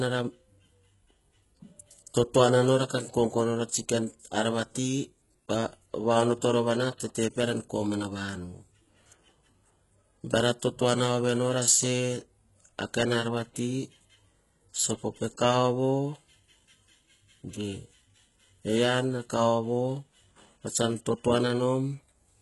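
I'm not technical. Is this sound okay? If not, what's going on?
No. Throughout the whole clip, the speech carries the marks of heavy HE-AAC compression, the likely cause. This kind of compression keeps the lower part of the sound and fakes the upper part by copying lower tones upward, so s sounds come out gritty, metallic or lispy, and nothing is left above about 11.5 kHz. Unlike a muffled recording that simply loses its treble, this one still sounds bright, but the brightness sounds synthetic.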